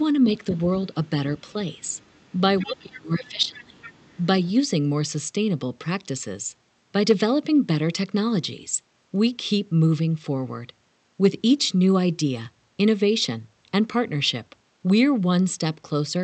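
Faint scraps of the other side's voice leaking through turn up at 1.38–1.52 s and 1.79–2.33 s, very far down, likely residual loudspeaker echo the canceller missed. A louder burst follows at 2.59–2.77 s. From 2.63 to 3.8 s the speech dips, dropping by up to about 30 dB, likely speech suppressed in double talk as the canceller ducks both sides. More leakage pokes through at 2.94 s, 3.55–3.63 s and 3.81–4.26 s.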